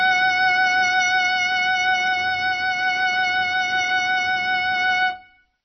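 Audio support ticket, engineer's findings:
Watery, swirly music throughout, with metallic chirps on bright transients and smeared attacks; nothing above about 5.9 kHz. Likely MP3 compression at a very low bitrate, around 24 kbps: encoder cuts treble at a fixed frequency, zeroes weak spectral lines that flicker frame to frame.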